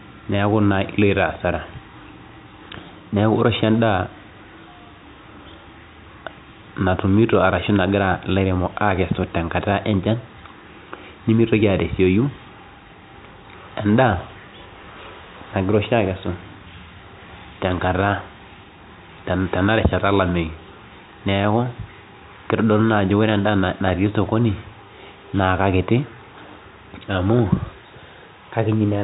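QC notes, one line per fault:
No faults are heard in this speech recording. It carries G.711 telephone coding, so nothing is heard above about 3.8 kHz, as expected of the telephone band.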